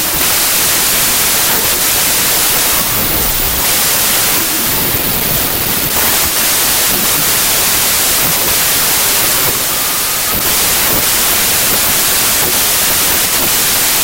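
A wrong sample width runs through the whole clip. The speech sounds like packed 24-bit data read as 16-bit, so bytes from neighbouring samples mix into noise. The speech sits buried under loud noise, playing at about two-thirds speed and pitch.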